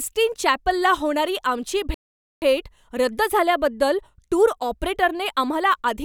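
At 1.94 s, right after "चॅपलला होणारी आमची", the speech cuts to silence for about 0.48 s, then resumes at 2.42 s with "रद्द झाल्याबद्दल टूर ऑपरेटरने". This is a playback stall: the player likely ran out of buffered data, briefly halting output.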